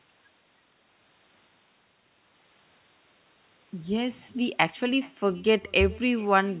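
Echo with no canceller runs throughout the speech: the far end's loudspeaker feeds its microphone, and nothing strips that pickup out, so each phrase returns roughly 0.4 s later as a faint, thin copy about 25 dB down, sitting over audio band-limited to 4 kHz.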